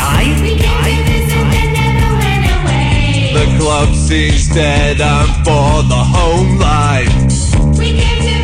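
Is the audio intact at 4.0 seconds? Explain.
No. At 4.0 seconds the music sounds dull and swirly. Everything above about 9.8 kHz is gone, and the remaining upper detail has a smeared, watery edge. The change arrived abruptly at 2.52 s with no gap and lasts to the end at 8.44 s. This is an adaptive stream at a lower bitrate: the player switched to a leaner encoding, consistent with a step from 96 down to 32 kbit/s AAC.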